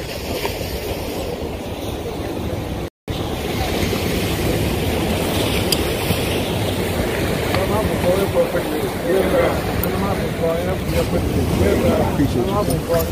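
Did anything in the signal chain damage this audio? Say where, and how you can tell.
Yes, though it's a stall rather than real damage, and it happens at playback, where the stream gets delivered. At 2.88 s the sound drops to silence and picks up again at 3.08 s right where it left off, with nothing skipped. That's a rebuffering stall. The player drained its buffer of downloaded audio and just waited about 198 ms for more to arrive, so the clip gets longer but loses nothing.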